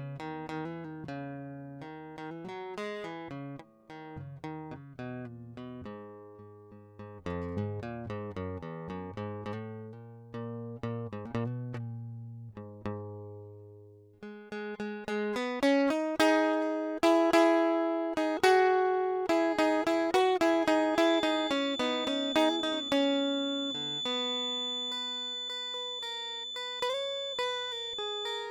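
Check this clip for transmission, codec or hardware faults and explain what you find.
There is one fault, a feedback whistle. From 20.92 s to the end, a thin, steady 3.5 kHz tone sits a few decibels below the music, swelling and fading slowly in level. The likely cause is a loudspeaker-to-microphone loop held just at the edge of feedback.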